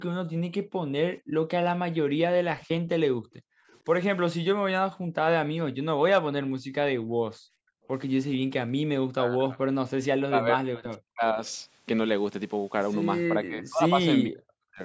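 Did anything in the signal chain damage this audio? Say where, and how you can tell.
Yes. The damage comes from the call's echo-cancellation stage, not from wiring, converters or a codec. Three kinds of fault are audible.

Background gated by the echo canceller: the room sound drops away between 0.25 and 3.68 s, between 4.91 and 5.15 s, and between 6.59 and 8.85 s. It falls by up to about 40 dB (about 31 dB in the short middle dip) and recovers each time. The canceller clamps the microphone while the far end plays. Unlike a network dropout, the talker's level holds and only the ambience vanishes.

Echo leak: faint delayed copies of the sound appear at 2.6–2.67 s, 3.69–3.79 s and 11.46–11.50 s. Each sits about 30 to 35 dB below the speech and trails it by 452 ms every time. The likely cause is far-end loudspeaker output that the canceller failed to subtract from its microphone. A room reflection would arrive much sooner and would not keep such a fixed, long lag across separate moments.

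Speech suppressed in double talk: between 9.13 and 11.41 s, and again from 13.3 to 14.82 s, the talker's own voice is pushed down by up to roughly 40 dB. This likely happens because both sides spoke at once and the canceller attenuated everything it could not separate from echo. It differs from the gating because here the voice itself dips rather than just the background. The band limit at 8 kHz belongs to the normal call microphone processing.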